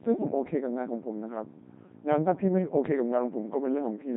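The speech has passed through a Codec 2 vocoder for its whole length, with heavy damage consistent with a 2.4 kbit/s mode. Only pitch, voicing, energy and a rough spectral shape survive, rebuilt from sine waves, so it sounds robotic and buzzy, with nothing above 3.8 kHz.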